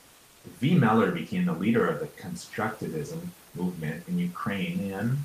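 Speech clip, where comfort noise replaces the background from 0.0 to 0.43 s, likely from discontinuous transmission: a steady, featureless hiss about 1 dB quieter, smooth and uniform on a spectrogram, before the textured room noise returns.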